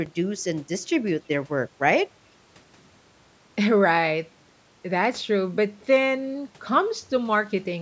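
No technical faults are audible in this speech recording.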